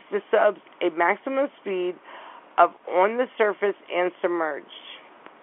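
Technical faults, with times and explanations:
No technical faults can be heard in the speech. It carries the sound of G.711 telephone coding, confined to the line band of about 300 Hz to 3.4 kHz, with at most a faint quantisation noise that follows the level of the speech.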